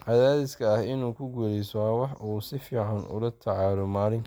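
No technical faults can be heard anywhere in this speech recording. There is nothing here that needs a time mark or any further comment.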